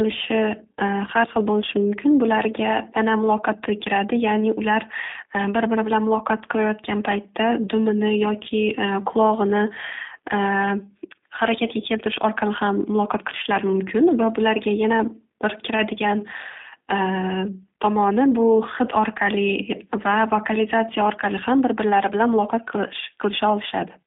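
From start to finish the speech has gone through a G.729 codec, and the damage is plainly audible. It sounds rough and a bit synthetic, as if rebuilt from a filter and a handful of pulses, which fits an 8 kbit/s coder. The band runs only from about 250 Hz to 3.7 kHz.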